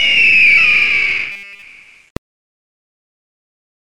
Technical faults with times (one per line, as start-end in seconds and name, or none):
1.32-1.62 robotic sound from repeated short buffers